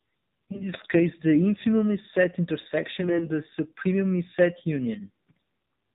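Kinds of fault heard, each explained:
AMR narrowband mobile codec: the speech is cut off above 4 kHz and sounds buzzy and synthetic throughout, fitting a low AMR-NB rate near 7.4 kbps, unlike plain band-limiting.
AMR bit errors: brief hoarse, scratchy, gargly bursts near 0.5, 3.0 and 5.3 s, where pitch and level hold. That sets them apart from dropouts or the steady codec buzz.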